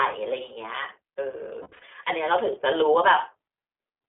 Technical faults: iLBC codec; lost iLBC frames

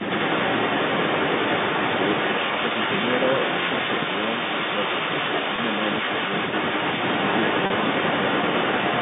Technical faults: echo leak; packet loss with pitch repetition

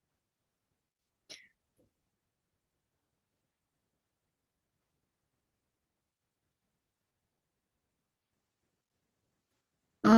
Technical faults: none

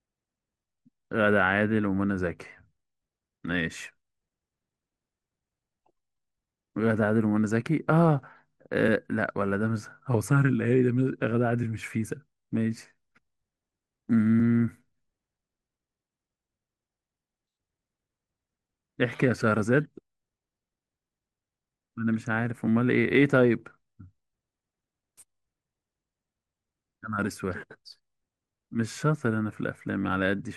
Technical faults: MP2 compression

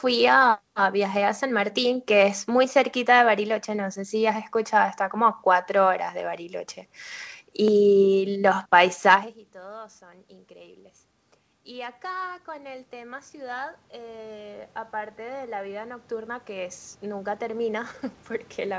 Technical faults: dropped buffer (overrun); automatic gain rising

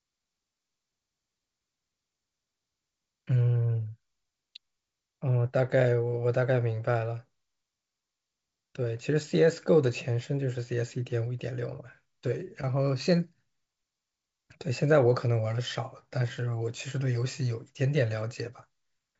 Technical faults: none

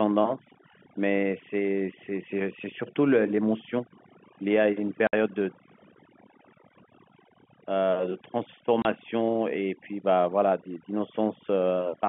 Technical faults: overdone noise removal; packet loss filled with silence

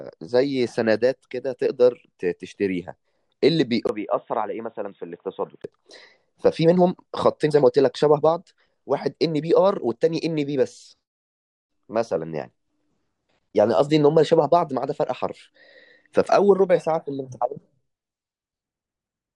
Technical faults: input switched to a poorer device

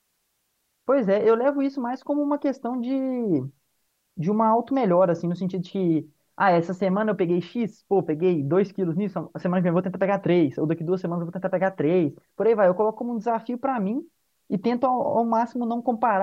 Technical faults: none

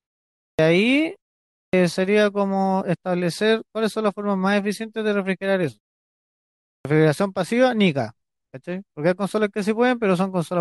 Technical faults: clipped start after a pause

